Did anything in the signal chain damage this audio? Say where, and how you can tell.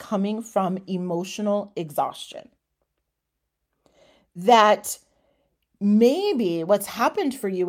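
No, nothing in the chain seems to have left a mark on this speech recording that I can hear, so there's no stage to point a finger at.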